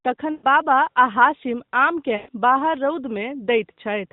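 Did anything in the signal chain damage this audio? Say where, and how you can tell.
Yes, the radio link: lost AMR speech frames at 0.32–0.46 s and 2.16–2.30 s. Each 120 ms gap smears and fades as the decoder repeats its last good settings, which fits six dropped frames.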